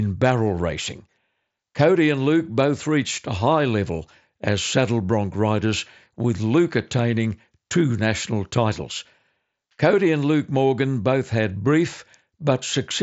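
There are no technical faults to describe in time order anywhere in the speech.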